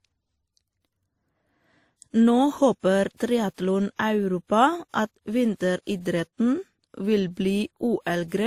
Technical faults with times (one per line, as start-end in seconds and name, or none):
0.00-8.46 transcoding between lossy codecs